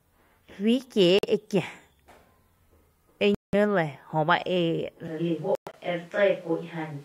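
At 1.19 to 1.25 s, the speech cuts out for 46 ms. Abrupt silence, then it resumes further along. Likely a Bluetooth dropout, with packets arriving too late. A 186 ms gap follows at 3.35 to 3.55 s. From 5.08 s to the end, the speech turns roomy and hollow, with thinner bass. The level stays much the same. Room noise sits about 30 dB below the speech. This is likely a switch to a distant microphone. Between 5.55 and 5.75 s, short gaps break the sound. The longest lasts 116 ms.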